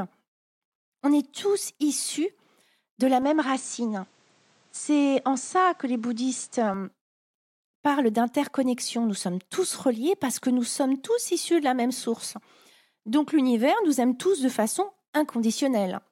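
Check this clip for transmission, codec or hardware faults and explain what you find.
One fault stands out: from 3.22 s to 6.74 s, just after "de la", the sound turns duller and narrower, which likely means the input switched to a poorer device. Nothing above 9.2 kHz comes through, a faint new background noise appears well beneath the speech, and the tone changes while loudness stays about the same. The switch is seamless, without a gap. Because the noise and tone change along with the bandwidth, this is a different input device rather than a codec simply narrowing its band.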